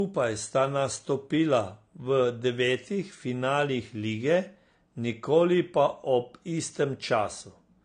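Speech clip, MP3, with nothing above 9.6 kHz throughout, likely low-bitrate audio saved at a high bitrate: the earlier lossy pass's cut-off and artefacts survive re-encoding.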